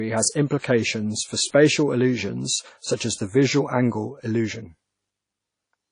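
Throughout, low-bitrate WMA compression is the likely cause: coarse long-block quantisation smears noise around syllables, leaving ringing, washy speech with nothing above 10.1 kHz.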